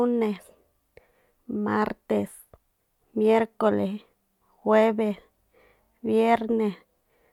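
No technical faults can be heard anywhere in the recording; the signal holds steady and continuous throughout.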